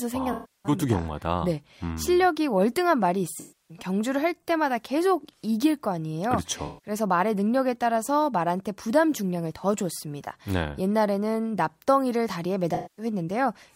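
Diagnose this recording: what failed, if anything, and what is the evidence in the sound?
AAC frame loss with concealment at the codec stage, at 0.32–0.72, 3.40–3.77, 6.66–6.91 and 12.74–13.05 s, each lasting roughly 0.17–0.32 s. The decoder rebuilds the missing frames from the last good spectrum, so unlike a plain dropout the gaps hold smeared, phasey sound instead of clean silence.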